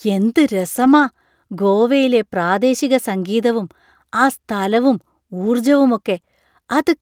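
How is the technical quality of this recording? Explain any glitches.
The speech has three short stretches of lost packets rebuilt from error correction. None of them leaves a gap, but each one briefly sounds rougher. The first runs from about 0.75 to 1.05 s, with roughly 160 ms of rebuilt audio, which fits several separate losses. The second is a single blip at 1.81 s, just before "പ്രാദേശിക സംഗീതവും ആ സ്ഥലവും", and sounds like one lost packet. The third comes right after that same phrase, from 5.37 to 5.47 s, with about 60 ms rebuilt.

Here's what's going on. Each lost packet had a low-bitrate backup copy riding along in the packet after it (Opus in-band FEC), and the decoder played that copy instead. That keeps the flow unbroken, but those frames come out grainier and noisier, which is the brief roughness you hear at each spot.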